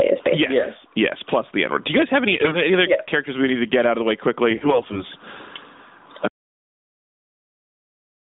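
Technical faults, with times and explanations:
Throughout: gain pumping. The level swings by roughly 20 dB, pulling loud and soft parts closer together into a squashed sound. A fast limiter on excessive gain is the likely cause.
2.32 to 2.61 s and 4.50 to 5.03 s: AMR bit errors. After "you guys have" and after "out of the way", speech turns scratchy and gargly. Corrupted frame bits misplace excitation pulses.
6.28 s to end: audio dropout to silence. The sound cuts off abruptly into total silence without room tone. Lost input, with silence written afterwards, is the likely cause.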